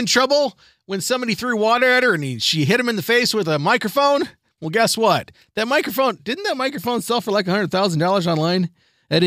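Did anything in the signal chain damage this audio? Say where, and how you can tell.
No, nothing in this speech recording shows damage from any stage of the signal chain. I can't point to any moment or stage where the chain has altered the sound.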